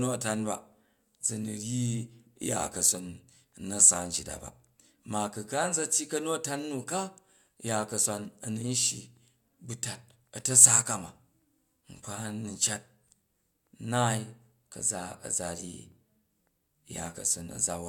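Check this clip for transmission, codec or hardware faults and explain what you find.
No transmission, codec or hardware faults are audible here.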